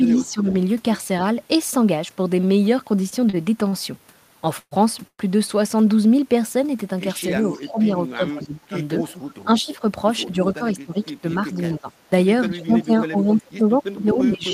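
Right at the start, from 0.15 to 0.26 s, there's a faint echo leak: a delayed copy of the speech trailing by 265 ms, about 20 dB below the main level. That's most likely the far end playing the call on a loudspeaker, with its echo canceller letting some of the mic pickup slip back to us. It's brief and quiet, more a ghostly scrap than a clear repeat.

Overlapping that, from 0.18 to 0.48 s, we get speech suppressed in double talk. The speech dips by up to about 10 dB for roughly 300 ms. The likely story is that the canceller couldn't tell the local talker from its own loudspeaker echo while both were active, so it pulled everything down. You hear a short sag in level rather than a full dropout.

From 3.09 to 3.74 s there's a run of repeated stalls, a stutter. The jitter buffer ran dry four times, and the receiver stretched the last bit of sound to cover each gap. That adds up to 109 ms of filler, with the longest single gap at 41 ms and nothing actually lost. 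It comes across as a dragging, hiccupy stretch, roughly a sixth of that span being fill.

Then come two call audio freezes. The first runs from 4.59 to 4.73 s and the second from 5.07 to 5.21 s, filling 122 ms and 113 ms respectively. Packets were likely held up in transit, so the buffer emptied and the receiver carried the last sound forward as a fading buzz. That fade goes fully silent for about 40 ms in the first and 60 ms in the second. When playback resumes it picks up where it stopped, so the gap is inserted and nothing is skipped.

From 7.30 s to the end, speech suppressed in double talk returns, and it's much heavier this time, with drops as deep as about 25 dB. Again it's likely the canceller choking on simultaneous talk. The speech ducks hard while the other side is active.

Alongside it, from 7.51 to 9.76 s, there's a longer echo leak at the same 265 ms delay, sitting about 25 dB down. 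It's likely the same loudspeaker path, giving a faint trailing copy under the speech.

From 10.30 to 11.55 s there's a jitter buffer speed-up. The buffer had built up more audio than it wanted, so the receiver trimmed tiny pitch-period-sized chunks over and over, about a tenth of a second in all. Playback runs at 108% speed with the pitch unchanged, so the speech just sounds a bit rushed.

Finally, from 12.80 s to the end, the echo leak is back and it's loud: the same 265 ms delay, but only about 5 dB below the speech. The far-end canceller is likely barely touching it here, so you hear a strong delayed double of the speech right on top of it.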